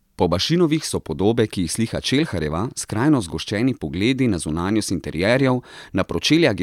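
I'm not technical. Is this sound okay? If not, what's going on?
Yes, nothing in this speech recording points to a technical problem. There are no dropouts, glitches or other faults to explain here.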